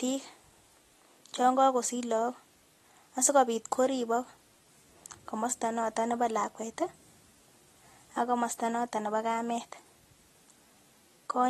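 From start to finish the speech carries AAC compression damage, plainly audible, with nothing above 12.4 kHz. The treble is dull and smeared, and sibilants take on a fizzy, warbling texture as frequency bands drop in and out frame by frame. That shifting texture is what separates it from a simple low-pass filter, which would dull the sound cleanly. The likely cause is AAC-LC encoding at a low bitrate, consistent with about 32 kbps.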